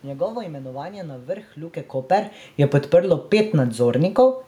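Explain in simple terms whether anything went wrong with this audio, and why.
Around 2.75 s there's an automatic gain falling moment: the recorder's level control decides things are too loud and turns itself down, so the speech and the room noise behind it sink together until about 3.12 s. It's the equipment reacting, not anyone speaking more softly.

Almost straight away, from 3.03 s to 3.6 s, you get automatic gain rising. The control decides it's now too quiet and brings the level back up, so the speech and background swell together.

The change in loudness near 1.5 s is just the talker shifting relative to the microphone, and the room noise was there in the room itself.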